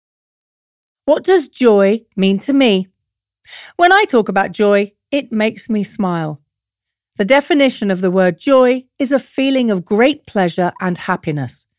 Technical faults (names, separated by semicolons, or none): none